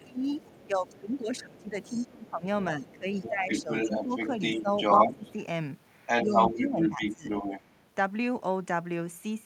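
From 0.0 to 5.27 s the talker's speech is suppressed in double talk: the level dips and thins in pieces, falling by roughly 20 dB at worst, over around three seconds in total. The other side's voice leaks through from 0.38 to 2.05 s, faint and well below the talker, then again from 2.81 to 5.33 s at about the same level as the talker. This is likely an echo canceller that could not tell its own talker from loudspeaker echo, so it pulled both down while residual far-end audio still reached the microphone.

From 6.06 to 7.8 s the leaked voice returns, now slightly louder than the talker, and from 6.24 to 7.27 s the talker is suppressed again. These dips reach roughly 15 dB and add up to under a second. The two voices compete directly, with the wanted one pushed under the echo.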